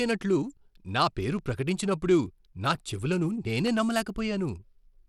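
Across the whole speech recording there is a plainly audible gritty, grainy coating, with the upper detail sounding coarse and unsteady, though the band still reaches up to 21 kHz. This is likely Bluetooth SBC compression: the codec splits the signal into a few wide sub-bands and quantises each one coarsely without a hearing model, so the grain it adds stays audible. The amount of damage points to a modest bitrate of around 96 kbps.

At 1.39 s, right after "నా పేరు" and just before "ప్రకటించినప్పుడు నా చెవులను", a sharp tick cuts through the sound. This is a block of digital silence about 1.3 ms long, which fits a 64-sample buffer that was not filled in time. At 3.67 s, right after "పేరు ప్రకటించినప్పుడు నా చెవులను", a tick comes from a second block of silence about 0.67 ms long, which fits a 32-sample buffer. In both cases the signal drops abruptly to silence and comes back with no fade.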